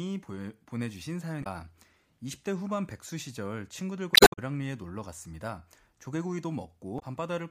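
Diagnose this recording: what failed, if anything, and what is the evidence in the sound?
Three short faults break through the speech, at 1.40 to 1.47 s, 4.12 to 4.39 s and 6.96 to 7.03 s. The middle burst is the longest and stretches the timeline by about 46 ms. The failure sits at the codec stage: damaged data in a compressed stream. Corrupted bytes made the decoder misread those frames, lose sync and search for the next valid frame header, so the signal was disrupted at those points.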